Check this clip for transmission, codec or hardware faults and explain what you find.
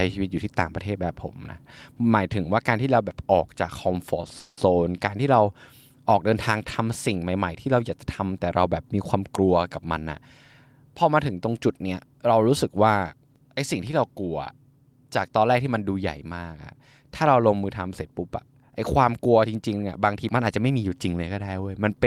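Three network-related faults affect delivery of the speech; none point to codec or hardware trouble.

From 4.21 to 4.25 s there is a short stall from a late packet: a sound is held on for about 20 ms too long, with a faint buzzy smear. A packet arrived late and the jitter buffer emptied, so the receiver stretched the last sound until it came, then resumed exactly where it stopped. Nothing is lost, but playback now sits 20 ms later.

Soon after, from 4.39 to 4.59 s, comes a call audio freeze. The sound stops moving forward and turns into a held, fading buzz for about 180 ms, sinking to silence for the final 20 ms before the speech picks up again. The likely cause is packets held up in transit, draining the jitter buffer so the receiver had to invent continuation sound. Nothing is missing, but 180 ms of delay is added.

From 20.41 to 21.23 s there is a jitter buffer speed-up: the speech runs at about 110% of normal speed, sounding hurried while the pitch stays unchanged. 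With more audio queued than the buffer's target, the receiver trimmed many tiny pitch-period slices in succession, discarding about a tenth of a second overall to bring the delay back down.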